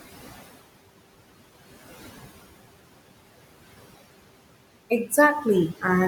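From start to finish there are noise suppressor artifacts: the processing keeps pushing the room noise, which sits about 17 dB under the speech, down by roughly 17 dB in the gaps, then letting it back up whenever speech comes in, so the background pumps audibly.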